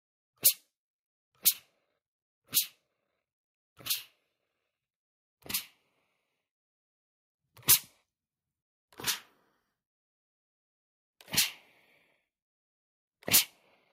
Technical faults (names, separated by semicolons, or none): none